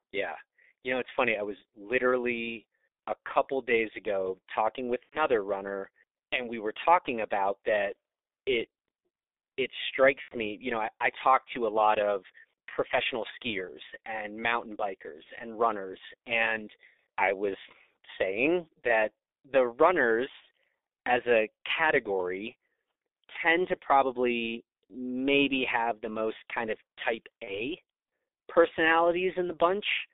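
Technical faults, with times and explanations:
throughout G.723.1 codec: speech is muffled and hoarse with smeared consonants, because the line passes only 300 Hz to 3.7 kHz and heavy coding near 6.3 kbit/s updates the voice model slowly.
5.03–5.26 s, 10.22–10.36 s, 15.23–15.30 s, 27.44–27.62 s VoIP packet loss concealed by the speech codec: the speech turns into a brief buzzy or hissy smear that fades, then sounds weak for a moment. This happens after "days ago talking with" and before "runner and we were", and again after "professional skiers and mountain" and before "and runners and I", and after "most kind of type". The decoder extrapolated from its last pitch and filter through the gaps, which fit about 90 ms lost at 5.03 and 10.22 s and about 30 ms at 15.23 and 27.44 s.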